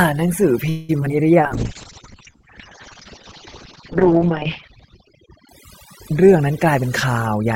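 Overdone noise removal runs through the whole speech clip. The suppressor cuts any frequency band that falls near its noise estimate, so quiet parts of the voice go along with the hiss. The background drops to near silence broken by twinkling specks. On a spectrogram the floor between words is almost black with isolated bright dots, and the harmonics have ragged, eaten-away edges where weaker partials were removed.

From 0.69 to 0.91 s comes a call audio freeze. The last sound is stretched into a fading buzz or hiss for about 194 ms and never drops to true silence. Nothing is lost: the audio resumes where it stopped, pushed later. The likely cause is delayed packets draining the jitter buffer. A spectrogram shows frozen, smeared partials decaying across the gap, and the waveform shows a smooth, shrinking continuation instead of a break.

Short concealed packet loss follows at 1.01 to 1.04 s and again at 1.03 to 1.05 s, each around 20 ms of audio that never arrived in time. 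The receiver patched the first briefly from the preceding sound. The second was not filled at all. The result is a quick smear or wobble. On a spectrogram these are narrow vertical seams where the texture blurs or steps abruptly, and the waveform shows a small discontinuity.

At 1.09 to 1.11 s the playback skips ahead, dropping about 70 ms of audio and splicing the two sides almost directly. The sound lurches forward. The waveform shows an abrupt junction with mismatched envelopes. The spectrogram shows formant tracks that jump rather than glide across a hard vertical edge.

Jitter buffer slow-down occurs twice. From 1.16 to 1.42 s, 38 ms is added and the audio plays at 88% speed. From 2.02 to 2.38 s, 42 ms is added and it plays at 91%. Single pitch periods were repeated to rebuild the buffer reserve, so the sound drags at unchanged pitch. On a spectrogram the harmonics keep their spacing while syllables stretch sideways, and the waveform shows runs of near-identical cycles.

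A call bitrate drop spans 1.39 to 6.05 s. The bandwidth falls from 20 kHz to 8 kHz, and the coarseness fits an encoder pushed from around 32 kbps down to about 8 kbps. It stays at that lowest setting for about 2.8 s. The speech turns muffled and rough. A spectrogram shows everything above 8 kHz cut off flat like a shelf, with blocky, smeared detail below it.

Finally, jitter buffer speed-up takes the last stretch, from 6.35 s to the end. Short pitch-period pieces were removed, about 100 ms in total, and the audio runs at 107% speed. It sounds hurried but keeps its pitch. On a spectrogram the syllables look compressed in time while the harmonic spacing stays the same, and the waveform shows tiny splice points where whole cycles were cut out.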